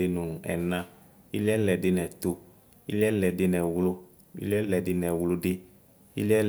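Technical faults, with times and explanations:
No technical faults can be heard in the speech recording, and the signal stays continuous and steady throughout.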